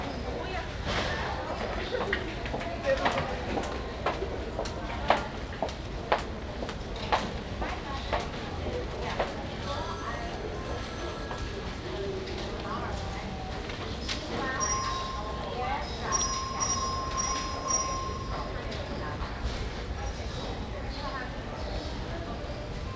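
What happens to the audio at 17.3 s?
Nothing goes wrong at 17.3 s: the audio passes through intact, with only the band limit of the wideband call codec, which leaves nothing above about 8 kHz.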